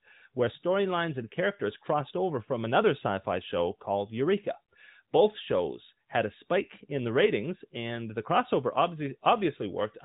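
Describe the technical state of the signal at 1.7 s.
At 1.7 s the speech is intact, with no fault present, only the steady narrowband character of the AMR mobile codec path, which passes nothing above about 3.8 kHz.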